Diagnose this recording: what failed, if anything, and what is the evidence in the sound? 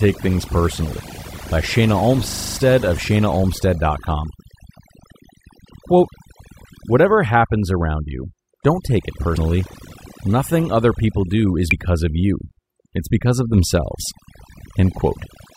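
Overdone noise removal runs through the whole speech clip, at the processing stage. The background has been pushed down, with little twinkling specks popping in and out. The reducer was clearly set too hard. Any frequency band sitting near its noise estimate gets pulled right down or shut off, so the quieter parts of the voice get eaten along with the hiss.

A system hang loop at 2.29 to 2.57 s points at the driver or buffer stage. You hear a rattling buzz at 25 Hz, which is one 40 ms chunk of audio repeated exactly, seven times over. The software side froze while the sound hardware kept cycling the same ring buffer, which fits a buffer of about 40 ms. Nothing much seems to go missing around it; the stall just inserts the loop.

Compressed frames skipped shows up three times, at the codec or storage end. At 9.36 s the audio jumps ahead by about a tenth of a second. At 11.69 to 11.73 s it skips roughly 70 ms, and at 14.10 s only about 20 ms. 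Whole frames were either missing or rejected by the decoder as damaged.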